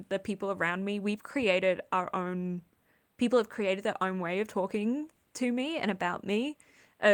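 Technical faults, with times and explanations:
Nothing in this speech recording stood out as a technical problem on listening.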